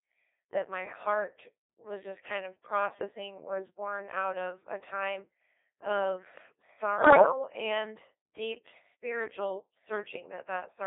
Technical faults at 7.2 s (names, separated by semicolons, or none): Codec 2 vocoder; bit errors on digital voice radio